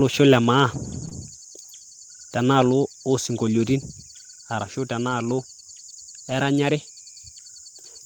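Around 1.01 s a lost packet was rebuilt from error correction, so 20 ms plays from a rough, noisy low-bitrate copy. Right after, from 1.05 to 1.13 s, there's short concealed packet loss: two back-to-back holes the decoder papered over by extending the last sound, giving a brief smeary wobble. The same rougher rebuilt texture comes back at 5.05 to 5.11 s, 40 ms that fits two lost packets, and again at 6.31 to 6.33 s.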